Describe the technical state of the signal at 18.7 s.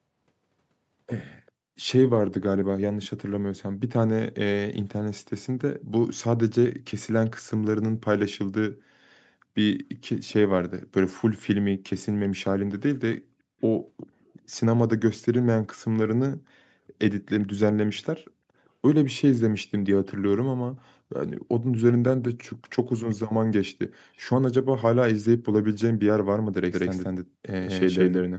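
From 18.65 to 18.69 s there is a brief echo leak: a very faint copy of the speech, delayed about 0.39 s, likely from an echo canceller missing loudspeaker pickup.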